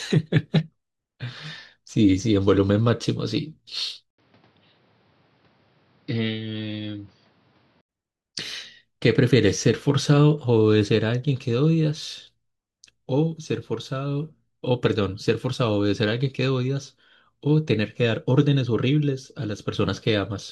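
Input switched to a poorer device, from 4.10 to 7.89 s in this speech recording: after a brief dropout of about 80 ms, the sound turns dull and boxy, with nothing above 5.9 kHz, a level a few decibels lower and new background noise sitting roughly 30 dB under the signal. The likely cause is the system swapping to a narrower-band microphone or a headset's call profile, then returning to the original input at 7.89 s.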